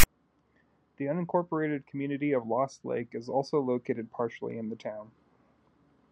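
File tags played as audio open the clip, from 0.00 to 0.04 s. A block of text metadata at the head of the file has been decoded as if it were sample data, so bytes meant as character strings drive the output directly. Because text bytes cluster in a narrow range of values, the result is a loud, harsh rasp pushed off to one side of zero, lasting about 35 ms with abrupt hard edges at both ends.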